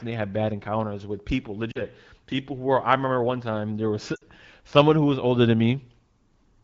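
A speech recording carried over an AMR wideband (HD Voice) link, with light coding damage at about 12.65 kbit/s, shows lost AMR speech frames twice. At 1.72 to 1.81 s, after "bad encounters with people" and before "people who were I", about 40 ms of signal is concealed. At 4.16 to 4.22 s, after "one time there was", about 60 ms goes the same way. These gaps fit two and three dropped 20 ms frames. The decoder repeats the last good pitch and spectral envelope with falling gain, so each spot drops toward near silence before speech returns weak or rough for a moment.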